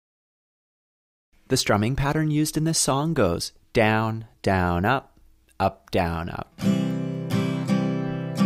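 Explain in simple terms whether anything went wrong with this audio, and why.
Nothing went wrong here: no dropouts, glitches, distortion or other transport or processing faults are audible anywhere in the recording.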